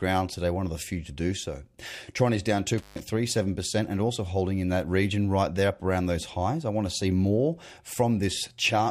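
Intermittent contact between 2.78 and 3.00 s interrupts this speech clip just after "is down". A loose plug or cable connection briefly loses contact, so the signal path opens for about 136 ms. The sound drops out abruptly, with crackle at each edge as the contact breaks and remakes, and faint hiss remains while the line is open. The short, scratchy gap points to a physical connection fault rather than a processing error.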